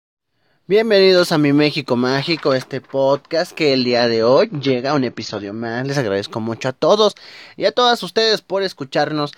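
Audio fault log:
3.71–5.71 s, adaptive stream at a lower bitrate: right after "este podcast que" the speech suddenly goes dull and swirly, with nothing above 7.6 kHz and no gap. It sounds like the stream slipped to a low-bitrate AAC version, something like 24 kbit/s instead of 96, for two seconds before recovering.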